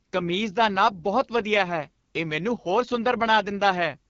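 Speech coded throughout with the AMR wideband (HD Voice) codec, with nothing above about 7.4 kHz. The plainly rough, raspy texture points to one of the codec's two lowest rates, around 8.85 kbit/s, where too few pulses remain to model the voice cleanly.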